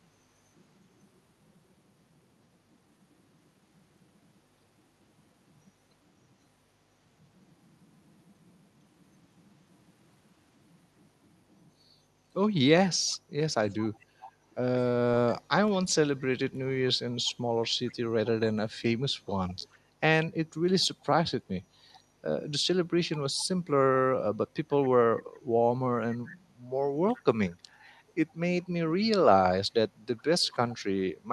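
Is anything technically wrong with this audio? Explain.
Yes. Echo leak at 13.07–14.55, 17.25–17.95, 19.49–19.78, 20.81–22.0, 23.40–23.44, 24.84–24.88, 27.16–28.34 and 30.17–30.76 s: a faint copy of the speech returns 418 ms late, about 25 to 30 dB down. The likely cause is a far-end echo canceller leaving loudspeaker pickup behind.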